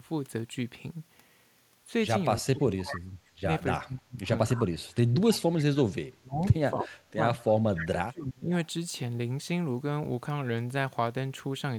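A speech recording where the talker keeps getting ducked: speech suppressed in double talk shows up at 2.52–3.21, 3.40–3.46, 3.74–4.26, 4.53–6.43, 6.72–6.93, 7.15–7.28 and 7.69–8.51 s, with the level falling somewhere between about 15 and about 35 dB at the worst points. The longest stretch, from 4.53 to 6.43 s, loses around a second and a half of the voice. The likely cause is an echo canceller that couldn't tell this talker apart from loudspeaker echo while the far side was speaking, so it pulled everything down. Inside one of those dips there's also a short echo leak at 6.82–6.87 s, a scrap of voice coming back 301 ms late at roughly 10 dB under the speech, which likely means the canceller on a speakerphone end let some of its microphone pickup slip through and sent it back.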